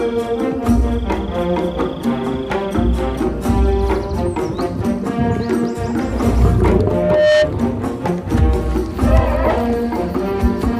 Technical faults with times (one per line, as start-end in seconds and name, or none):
6.66-7.53 loudspeaker feedback squeal